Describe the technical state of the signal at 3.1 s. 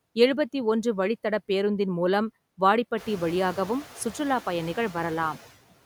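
Noise suppressor artifacts run through the whole clip. At 3.1 s the suppressor is cutting suspected noise bands frame by frame, by about 17 dB, against room noise that has just risen. The leftover noise sinks between phrases and swells under the speech.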